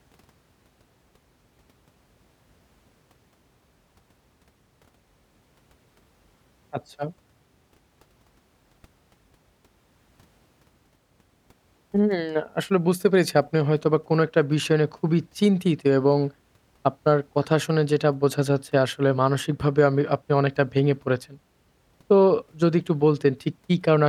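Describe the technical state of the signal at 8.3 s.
Nothing is wrong with the signal at 8.3 s: the speech there comes through intact, with no dropout, click, distortion or other fault at that moment.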